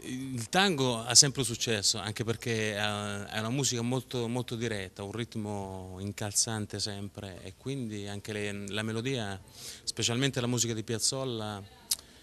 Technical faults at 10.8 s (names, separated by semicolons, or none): none